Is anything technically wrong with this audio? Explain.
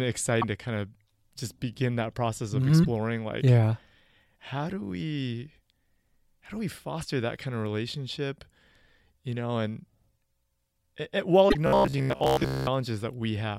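Yes. The speech has two kinds of technical fault.

First, damaged data in a compressed stream. It occurs four times: 0.41 to 0.44 s, 2.81 to 2.87 s, 6.99 to 7.05 s, and 11.46 to 11.55 s. Part of the coded data is wrong there. The decoder cannot read those frames, loses sync and hunts for the next valid frame header. Each spot is heard as a short chirp or blip.

Second, robotic sound from repeated short buffers, from 11.67 to 12.67 s. The speech becomes a stiff, metallic buzz at about 66.7 Hz. It still loosely follows the speech. The likely cause is audio arriving too slowly. The software then repeats the last fragment of about 15 ms to fill the gap. That fixed repeat sets the buzz pitch. Most of this stretch, roughly two thirds or more, is repeated material rather than new sound.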